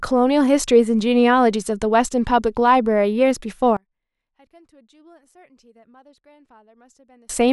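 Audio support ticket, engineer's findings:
One channel inverted, 3.77–7.29 s. Speech collapses on mono sum, level down about 35 dB, leaving a faint residue. Likely polarity reversal on one stereo leg (wiring, cable, or channel gain sign), so the shared centre content cancels.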